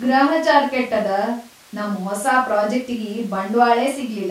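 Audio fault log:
No technical faults are present in the signal path of this speech recording.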